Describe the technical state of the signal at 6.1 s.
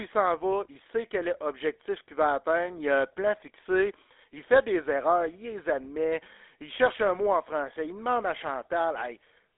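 At 6.1 s the speech is passing through a GSM full-rate codec, as it does across the whole clip. The coder models the vocal tract and excites it with a sparse, regularly spaced pulse train, at a rate consistent with the 13 kbps full-rate scheme, and the line confines the band to about 300 Hz to 3.6 kHz, with nothing above 3.8 kHz. The result is muffled, telephone-narrow speech with a plainly audible buzzy, gravelly roughness.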